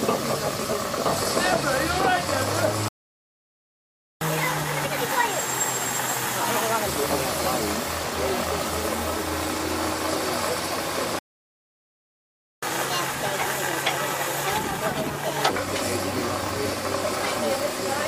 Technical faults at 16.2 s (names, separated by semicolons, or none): none